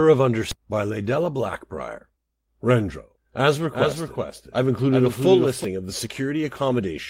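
Skip ahead at 0.51 to 0.62 s: roughly 0.7 s of speech was dropped in transit or by an overflowing jitter buffer while later audio waited, so playback jumps forward with an almost seamless splice.

Doubled audio track from 3.72 to 5.64 s: a dry, full-band copy trails around 0.4 s behind, about 5 dB quieter, starting and stopping abruptly, likely from a second, slower capture path.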